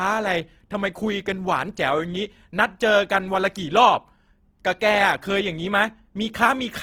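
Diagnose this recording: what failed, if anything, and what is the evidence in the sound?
The codec stage shows Opus compression throughout: speech sounds grainy and rough, with noisy fill where detail should be, though the bandwidth stays full. This likely comes from Opus in its CELT mode at a low rate, around 16 kbps, padding starved bands with noise.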